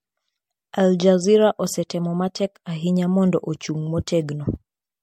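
Throughout the speech, the sound is swirly, hollow and smeared, with blurred consonant attacks and nothing above 16.5 kHz. This is generation loss, likely from about five successive MP3 encodes, consistent with 64 kbit/s, each requantising on a shifted frame grid and compounding noise and spectral holes.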